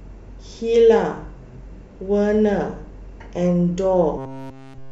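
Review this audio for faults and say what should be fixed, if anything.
Robotic sound from repeated short buffers, 4.18 to 4.92 s: the speech collapses into a rigid metallic buzz at 134 Hz for that entire stretch. The likely cause is new audio arriving too seldom, so a fragment of about 7.5 ms is looped while the real audio is skipped. To prevent it, give the capture or network path enough buffering and scheduling priority that playback never runs dry.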